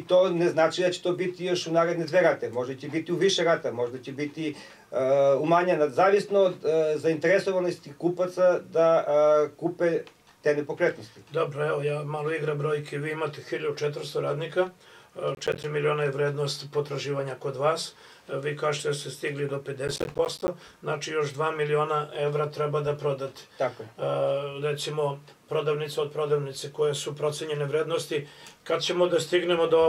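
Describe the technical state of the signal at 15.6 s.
At 15.6 s the sound is torn by a short burst of gritty crackle, running from about 15.35 to 15.64 s. This is processor overload crackle: the processor fell behind and missed around ten deadlines for buffers of roughly 10 ms, each gap filled with silence.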